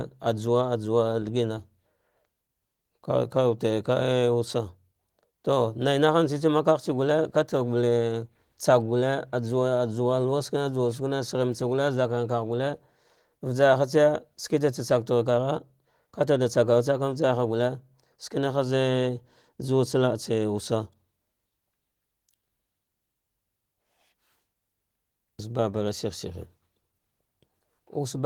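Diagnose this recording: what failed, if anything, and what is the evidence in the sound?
Nothing in this speech recording points to a failure at any stage. The Opus voice compression path is working as intended, running in its hybrid mode with the band kept fullband up to about 20.2 kHz and only light coding traces, which fits a rate around 20 kbps.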